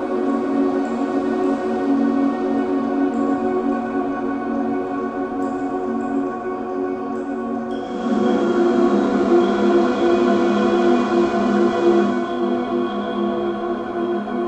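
At 7.69 s the digital radio blends to analogue: the receiver lost its digital stream and cross-faded over about 0.44 s to the station's FM broadcast, bringing hiss roughly 30 dB down and a level shift of about 4 dB, before blending back at 12.48 s.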